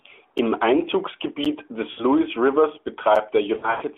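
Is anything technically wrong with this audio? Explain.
Yes. Two faults interrupt this speech.

A block of digital silence cuts in at 0.38 s, 1.45 s and 3.16 s as brief ticks. Each is a 7 to 11 ms silent gap with hard edges. The one at 1.45 s fits a 512-sample buffer the program failed to fill in time.

Lost AMR speech frames cause a slurred, fading smear from 1.91 to 2.05 s, about 60 ms of missing audio. A longer stretch runs from 3.54 to 3.83 s, with 160 ms lost over 280 ms and a worst gap of 100 ms. In both places the decoder repeated earlier settings at falling gain in place of the corrupted frames.

The AMR narrowband codec runs at 12.2 kbps, and a 300 Hz to 3.5 kHz telephone band can be heard throughout.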